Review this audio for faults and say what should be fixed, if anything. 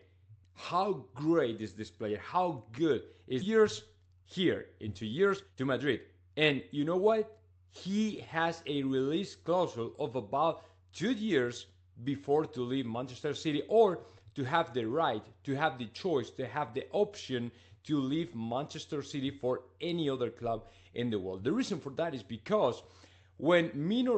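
At 3.41 to 3.52 s the sound jumps abruptly forward: a skip ahead, where roughly a second of audio was dropped and the two sides were spliced almost directly. Prevent it by sizing the jitter buffer to drain gradually rather than dropping audio when it overflows.

From 3.95 to 4.33 s (115% speed) and from 4.95 to 7.76 s (117% speed) the audio sounds hurried, though its pitch stays the same. This is jitter buffer speed-up: the receiver repeatedly removed pieces of one or a few pitch periods to shed excess queued delay. Prevent it by smoothing network delivery, or by capping the accelerate rate so the backlog drains more gently.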